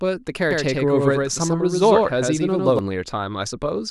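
From 0.51 to 2.79 s a doubled audio track appears: a dry, full-band copy trails about a tenth of a second behind, somewhat quieter, likely from a second slower capture path.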